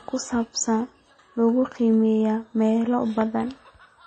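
Throughout the speech, nothing survives above 8.7 kHz, and smeared, swirly artefacts from two different codecs overlap, likely transcoding between lossy codecs, MP3 into HE-AAC, unlike single-codec compression.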